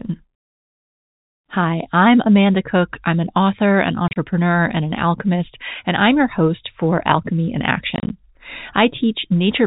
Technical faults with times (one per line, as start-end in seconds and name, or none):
4.08-4.16 packet loss filled with silence
7.96-8.10 packet loss filled with silence